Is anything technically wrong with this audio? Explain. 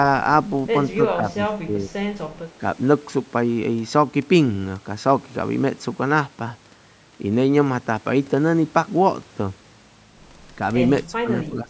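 Yes. The speech ducks in four places: 1.16–1.5 s, 1.66–1.95 s, 11.07–11.3 s and 11.48–11.7 s, sinking by roughly 10 to 20 dB. That's likely speech suppressed in double talk, with the echo canceller confusing the talker with far-end echo and squashing both.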